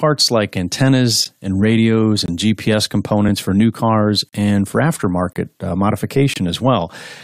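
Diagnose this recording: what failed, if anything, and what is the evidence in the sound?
A gap between stream segments at playback: hard-edged silent holes at 1.25, 2.26–2.28, 4.29–4.33, 5.33–5.36 and 6.34–6.36 s, roughly one per second. Mismatched segment timestamps leave short holes of about 10 to 40 ms, filled with silence. Unlike a dropout, the speech resumes exactly where it stopped.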